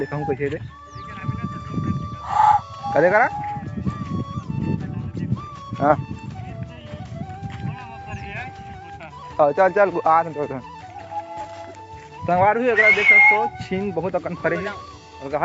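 No technical faults can be heard anywhere in the clip. It carries the sound of a call path: nothing reaches above 8 kHz, which fits a wideband call codec such as Opus and the call's microphone processing.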